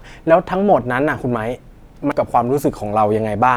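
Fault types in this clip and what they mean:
Damaged data in a compressed stream, at 0.0 s and 2.12 s: at these two points the speech is interrupted by a chirp, squawk, click or short hole. The bytes there are corrupted, so the decoder misreads or rejects the affected frames, loses its alignment with the stream and has to scan forward for the next valid frame header before normal decoding resumes. The first event sits right at the start of the clip.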